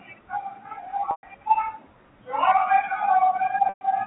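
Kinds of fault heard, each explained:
Packet loss with pitch repetition: at 1.11 s and 3.69 s the speech freezes into a buzzy held tone that fades toward silence, then resumes, each gap lasting 120 ms. The receiver bridged lost packets by repeating the last pitch period, fading it out, then cross-fading back.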